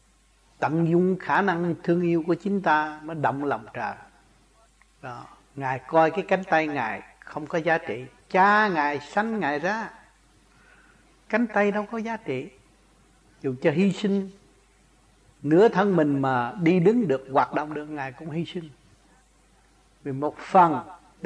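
No technical faults are audible.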